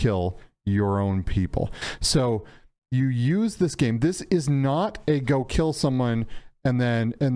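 No technical faults can be heard anywhere in the recording. Nothing in it calls for a timestamp or a note of any kind.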